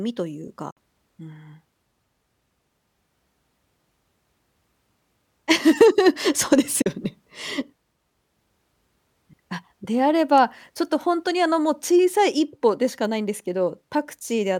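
At 0.71 s and again at 6.82 s, the speech cuts to silence for about 56 ms, then 37 ms. The sound resumes further on, with nothing replayed. This is likely a Bluetooth dropout, with a few packets arriving too late.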